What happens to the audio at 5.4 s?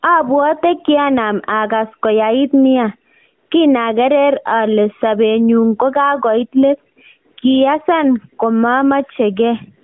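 At 5.4 s the audio is caught in gain pumping, which runs through the whole clip rather than starting there. The level heaves by around 10 dB. Loud and quiet parts sit closer together, so the speech sounds squashed. The likely cause is input gain set far too high, with a fast limiter or compressor clamping down on every loud sound.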